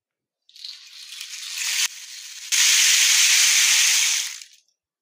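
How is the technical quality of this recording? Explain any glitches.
There's one clear glitch here, a sudden gain jump from 1.86 to 2.52 s. At 1.86 s everything drops by about 19 dB in a single step, background noise included, and at 2.52 s it snaps straight back up. Nothing fades in or out at either edge, which likely means a digital gain setting was changed with no ramp at all. You get a hard step in loudness each time, and those edges can tick.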